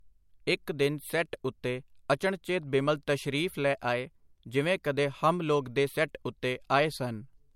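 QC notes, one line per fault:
throughout, low-bitrate audio saved at a high bitrate: likely a low-rate MP3 re-encoded at a higher rate, so nothing sounds above 16.6 kHz and the earlier artefacts remain.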